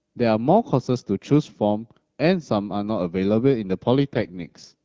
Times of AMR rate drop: 4.08-4.74

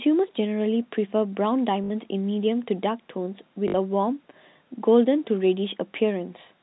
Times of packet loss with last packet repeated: 1.84-1.90, 3.68-3.74

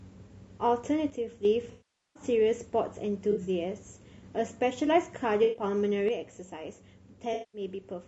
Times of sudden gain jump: 1.10-1.45, 6.08-8.08

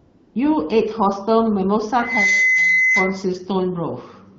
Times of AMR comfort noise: 0.00-0.35

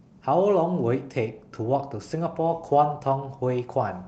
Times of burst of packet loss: none

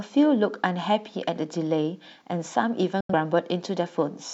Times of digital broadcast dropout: 3.00-3.14

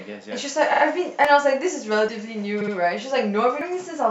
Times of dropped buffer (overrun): 1.25, 2.09, 3.61

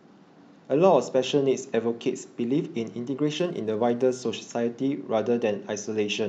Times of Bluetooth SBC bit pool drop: 3.39-4.22

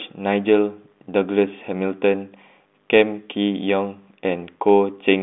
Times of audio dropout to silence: none

